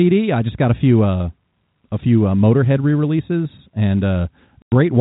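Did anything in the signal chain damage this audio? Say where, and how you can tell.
Yes, at the network stage, near the end. From 4.62 to 4.72 s the speech stops dead for 100 ms, with hard edges on both sides. That is packet loss filled with silence: the receiver got nothing for that stretch and played zeros. A natural pause would fade, and a driver or buffer underrun would not land this neatly on a 100 ms hole, which fits five 20 ms packets. Around the gap, the G.711 telephone coding keeps its normal 4 kHz band limit.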